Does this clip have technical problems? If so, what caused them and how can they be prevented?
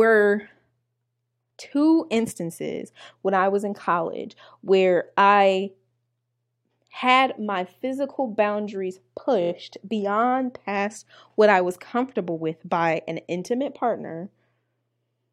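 Yes, there's one. Around 9.41 to 9.50 s the speech stutters: a tiny slice of about 23 ms gets played four extra times in a row. That's repeated frames, where a compressed frame was written or sent more than once and the decoder plays it again each time. The 23 ms size fits a 1024-sample frame at 44.1 kHz, and the clip runs about 93 ms longer because of it. To prevent this, make the encoder and transport drop duplicate frames by sequence number or timestamp instead of passing them on.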